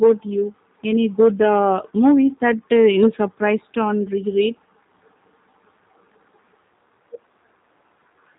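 Throughout, G.729 codec damage is plainly audible: speech rebuilt from a vocal tract filter and sparse pulses sounds rough and synthetic, consistent with an 8 kbit/s stream. A spectrogram shows nothing above about 3.8 kHz, with smeared, blocky harmonics.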